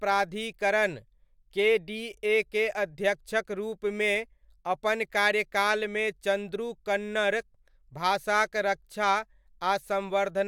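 No technical faults are audible.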